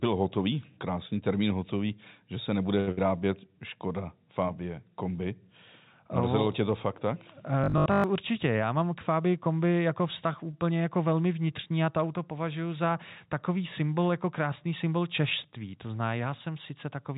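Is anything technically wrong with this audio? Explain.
Yes. This speech clip has several network-related faults, heard through a narrowband call path where G.711 A-law coding leaves nothing above 4 kHz.

At 2.8 s, just after "hotový že se nebude", a short stall from a late packet holds the last sound for about 71 ms until the packet arrives. Nothing is lost, which separates it from a loss burst.

Right after, at 2.91 to 3.0 s, a burst of packet loss fills 59 ms with a fading continuation, then resumes with 80 ms of audio missing, so the sound skips ahead.

From 7.64 to 8.04 s, after "tě to fakt tak", the sound turns into a rigid, metallic 50 Hz buzz that roughly follows the speech. The likely cause is repeated short buffers, which fits a 20 ms repeat. The fixed pitch distinguishes it from a plain stall.

From 8.74 to 9.24 s, jitter buffer speed-up trims about 50 ms of pitch periods, so the speech runs about 8% faster. 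The pitch stays the same, so it sounds hurried rather than higher.

At 10.51 s, after "kombi jako vztah" and before "jako velmi vnitřní a", another short stall from a late packet stretches the sound by 20 ms with nothing missing.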